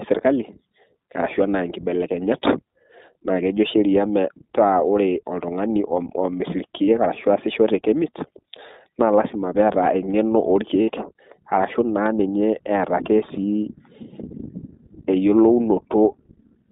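From the start, the speech runs through the iLBC codec. The band is narrow, from about 200 Hz up to 3.7 kHz, so the top end is gone. Each short frame is coded on its own, and the pattern fits 20 ms frames and iLBC's 15.2 kbps mode. The codec damage is plainly audible. The voice stays clear but sounds rough and slightly synthetic throughout.

Two lost iLBC frame events follow. The first runs from 6.84 to 6.89 s and lasts 40 ms, which fits two missing frames. The second runs from 10.82 to 10.90 s and lasts 60 ms, about three frames. In each gap the decoder repeats the last pitch cycle and blends in noise. It sounds like a brief, held, buzzy vowel. Because the frames stand alone, normal speech returns at once.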